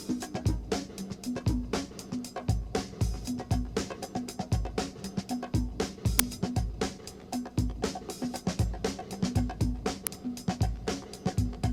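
At 6.19 s and 10.07 s, an uninitialised buffer plays leftover memory as samples, giving brief, loud cracks of 5.8 ms and 1.45 ms, fitting 256- and 64-sample buffers.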